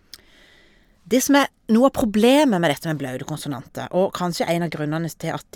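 Nothing stood out on listening to this speech recording.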